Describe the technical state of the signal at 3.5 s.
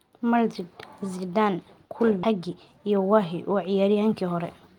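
At 3.5 s you're right in the middle of a jitter buffer speed-up that runs from about 2.35 to 4.43 s. The receiver had built up more audio than it wanted, so it kept snipping out tiny pitch-period-sized chunks to catch up, around a tenth of a second in total. The speech plays roughly 5% fast at unchanged pitch, so it comes across as slightly hurried rather than higher.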